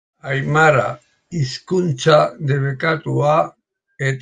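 Nothing stood out on listening to the speech here that would point to a technical problem at any moment.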